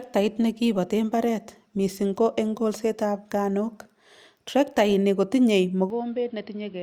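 The recording input was likely switched to a poorer device at 5.90 s, just after "traktaini kotinye", and the substitute stays in place until the end. There is no gap at the changeover. The narrower device passes a narrower band, so the speech abruptly turns duller and boxier. It also lands roughly 10 dB quieter, and brings its own background noise, sitting around 30 dB below the signal.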